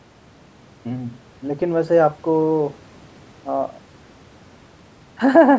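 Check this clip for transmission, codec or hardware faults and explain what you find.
Nothing here points to a transmission, codec or hardware fault; the speech has simply gone through a call's usual microphone processing, which trims the deepest bass and leaves nothing above 8 kHz, exactly as that path normally does.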